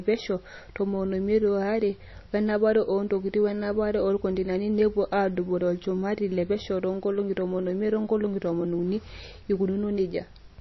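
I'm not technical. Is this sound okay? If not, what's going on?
No. Throughout the speech there is a dull, plainly watery quality. Nothing above about 5.8 kHz survives, so s sounds lose their crispness, and faint detail flickers in and out. This is likely MP3 compression at a low data rate.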